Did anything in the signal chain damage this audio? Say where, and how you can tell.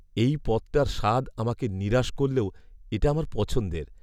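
No, nothing in the signal chain damaged this audio.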